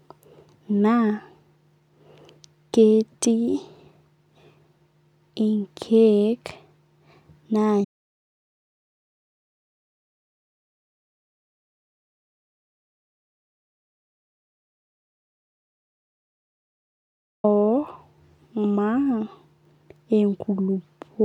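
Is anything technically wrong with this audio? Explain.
Yes. At 7.85 s the speech cuts off in mid-flow and the clip falls into silence until 17.44 s, a loss of about 9.6 s. This is an audio dropout to silence. The input signal was likely lost, and the recording carried on writing silence, so no room tone or noise floor survives in the gap. On a waveform it shows as a flat line. A spectrogram shows a solid black block with hard vertical edges on both sides.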